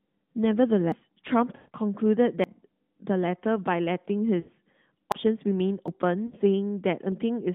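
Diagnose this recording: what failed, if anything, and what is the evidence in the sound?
Sudden jumps forward in the speech occur at 0.92, 2.44, 5.12, 5.88 and 7.12 s, each skipping roughly a tenth of a second or less with no gap. The likely cause is a dropped buffer (overrun) at the driver or buffer stage, where unread audio was overwritten and the two sides were spliced.

Around 1.56 to 1.70 s, 4.40 to 4.50 s and 6.26 to 6.36 s, the speech smears into a stretched, fading warble before recovering roughly. These are lost AMR speech frames at the network and codec stage. The narrowband 12.2 kbps decoder, with audio limited to about 3.7 kHz, concealed 140 ms, 80 ms and 60 ms of missing frames by repeating its last parameters with falling gain.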